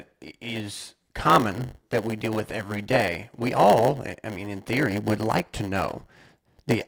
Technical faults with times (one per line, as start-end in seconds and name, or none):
0.00-6.88 block size mismatch (padded)